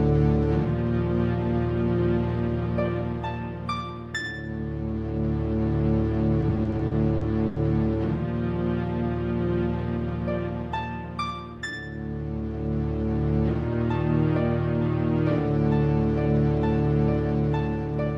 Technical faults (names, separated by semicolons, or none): repeated stalls (stutter)